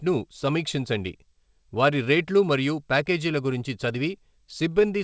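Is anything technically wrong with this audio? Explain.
No, nothing is wrong: the speech comes through a call path whose band stops at 8 kHz, as expected from a wideband codec such as G.722 at 64 kbps.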